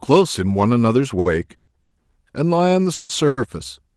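From 1.19 to 1.93 s the speech shows repeated stalls (stutter): packets arrived too slowly, the jitter buffer emptied four times, and the receiver stretched the last sound across 260 ms, the longest gap 110 ms. On a spectrogram these stretches appear as smeared, repeated harmonic bands with no new onsets.

A call audio freeze follows at 2.93 to 3.11 s (160 ms), then another at 3.27 to 3.39 s (100 ms). Each time the sound hangs as a fading buzz rather than silence, likely because packets were held up in transit. Afterwards speech resumes from where it stopped, nothing lost but delayed. The waveform shows a decaying, repetitive block; above 12 kHz the spectrogram is empty throughout.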